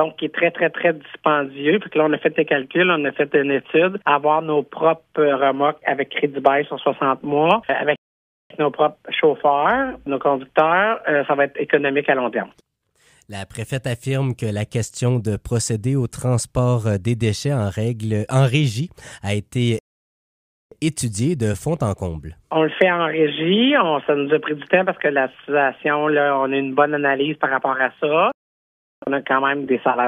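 At 7.96 s, 19.79 s and 28.32 s the sound cuts to silence mid-flow for about 0.54 s, 0.93 s and 0.70 s, then resumes. These are playback stalls, likely the player running short of data or its thread being blocked.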